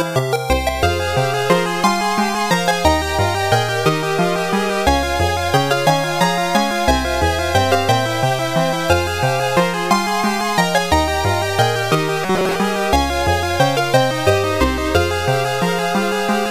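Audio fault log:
12.24 to 12.56 s: robotic sound from repeated short buffers, a rigid metallic 188 Hz buzz, likely from starved audio patched by looping a 5 ms fragment over most of it.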